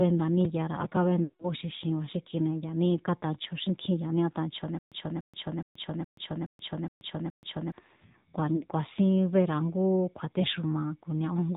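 Speech carried through the AMR narrowband mobile codec for its whole length: nothing above 4 kHz survives, and the voice has the plainly audible buzzy, synthetic edge of a low AMR-NB mode, which fits roughly 7.4 kbps, where too few pulses per subframe model the excitation. Lost AMR speech frames appear at 1.24 to 1.49 s, where the decoder repeats stale pitch and vocal tract settings with falling gain, so the sound smears and fades over about 160 ms, consistent with eight dropped 20 ms frames, before returning rough. Single-frame losses at 8.56 s and 10.42 s give brief dips. From 4.79 to 7.72 s there is a stutter with silent gaps: a 0.29 s fragment plays seven times, each followed by 0.13 s of digital silence, repeating every 0.42 s, likely from a playback or stream stall replaying its last buffer, with the intervening audio lost.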